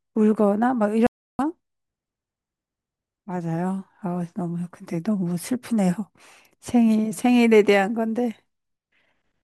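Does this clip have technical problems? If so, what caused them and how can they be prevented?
Yes, an audio dropout to silence runs from 1.07 to 1.39 s. The speech cuts to silence with no room tone, then resumes mid-flow. The input was likely lost briefly while the recorder kept writing silence. Secure cables and links, and monitor while recording.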